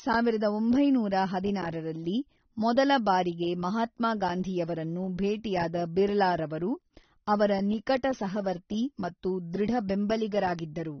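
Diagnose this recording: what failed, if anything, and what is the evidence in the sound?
At the codec stage, the speech was likely passed through AAC compression at a low bitrate, which fits about 24 kbps. Nothing survives above 6.3 kHz, so the whole clip sounds dull and smeared, with plainly audible fizzy, warbling artefacts on sibilants.

A bit error spike, from a flipped bit in memory or on a digital link, struck two adjacent samples at 7.97 s, just before "ಸಹವರ್ತಿ ಮತ್ತು", and again at 10.59 s. Each power-of-two jump is heard as one sharp, broadband tick unrelated to the speech.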